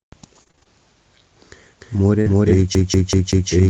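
Repeated packet loss (robotic sound) hits this speech recording from 0.35 to 0.67 s. Six short dropouts, the longest about 25 ms, are each patched by stretching the preceding sound, so over a third of that stretch is concealment and it turns choppy. A doubled audio track runs from 1.81 s to the end. A second full-band copy, about as loud as the original, trails it by roughly 0.3 s with no room colour and starts abruptly, likely from the signal being captured again through a slower path. A burst of packet loss from 2.21 to 2.28 s removes about 40 ms of audio. The receiver continues the last sound and fades it down, so a held buzz or dying hiss bridges the hole before speech resumes further on. A lost packet rebuilt from error correction covers 2.26 to 2.28 s, a 20 ms stretch that fits a single lost frame. It has no gap, but the low-bitrate copy sounds rougher and noisier. A CD stuck on one turn appears from 2.75 to 3.51 s. 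The same 0.19 s of audio repeats four times with a brief mute at each jump back, giving the fast, even stutter of a skipping disc.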